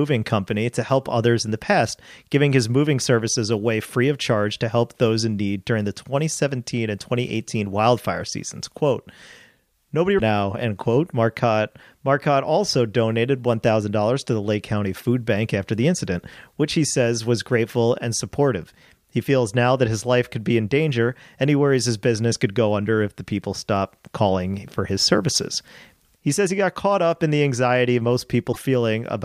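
At 10.15 to 10.21 s, the speech breaks up briefly. It happens again at 28.51 to 28.57 s. Both are damaged data in a compressed stream. The decoder misreads the corrupted frames, loses sync and hunts for the next valid header.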